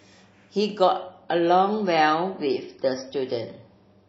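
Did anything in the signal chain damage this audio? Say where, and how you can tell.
Yes. At the network stage, an adaptive stream at a lower bitrate took over from 0.99 s to the end. Treble abruptly vanishes above 5.8 kHz with no gap, and coding artefacts thicken, which fits a switch from about 128 kbit/s MP3 to roughly 24 kbit/s.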